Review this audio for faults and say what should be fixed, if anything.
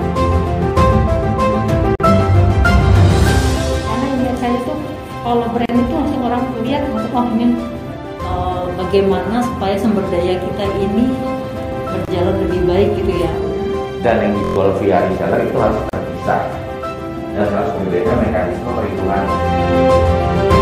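Gaps at joins of encoded pieces occur at 1.95–2.00 s (45 ms), 5.66–5.69 s (about 36 ms), 12.05–12.08 s (26 ms) and 15.89–15.93 s (about 38 ms). Each piece was encoded separately and joined untrimmed, so encoder start-up delay and last-frame padding remain as short silences with smeared edges. Unlike a dropout, the sound resumes exactly where it stopped, with nothing missing. Fix this by encoding the whole clip in one run, or by trimming the encoder delay and padding (gapless metadata) before joining.

A system hang loop appears at 14.44–14.56 s. One 23.22 ms slice repeats five times, producing a brief buzz at 43.1 Hz, which fits a 1024-sample ring buffer cycling while the system froze. Unlike the join gaps, this is repetition rather than silence, and roughly a tenth of a second of audio is skipped afterwards. Fix this by finding the stall in the driver or system that blocks the audio thread, and by giving that thread real-time priority.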